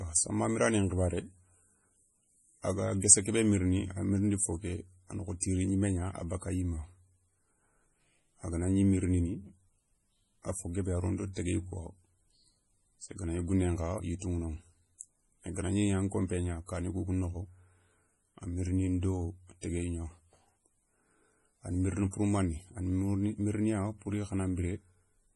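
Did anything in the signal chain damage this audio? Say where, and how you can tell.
Yes. At the codec stage, the speech has nothing above 11.4 kHz for its whole length, with a watery, swirly texture and smeared consonants. This is heavy MP3 compression, likely at a low bitrate around 32 kbps, where the encoder drops the treble and zeroes weak frequency lines frame to frame.

Also at the codec stage, there is pre-echo from 5.40 to 5.42 s, between "ké a na kho" and "gnimé gna a bakka". A 21 ms hiss smears ahead of the attack because the quantisation noise is spread across the whole transform block, including the quiet moment before the onset.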